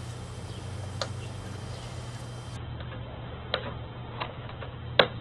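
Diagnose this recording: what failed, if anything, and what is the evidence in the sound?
The failure is at the network stage: an adaptive stream switched to a lower bitrate. From 2.57 s to the end, everything above 4.3 kHz vanishes and the texture turns coarse, which points to a step from about 64 kbit/s down to roughly 8 kbit/s Opus. Unlike packet loss or a dropout, the sound never breaks and nothing is concealed or repeated. The quality changes abruptly and stays degraded, as a rendition change does.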